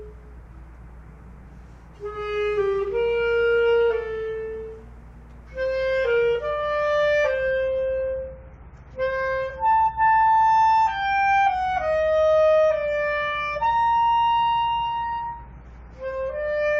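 An adaptive stream at a lower bitrate takes over at 7.51 s and runs to the end. The player switched abruptly, with no gap, to a leaner encoding, consistent with a drop from 96 to 32 kbit/s AAC. Codec artefacts rise, and nothing above 8.9 kHz remains.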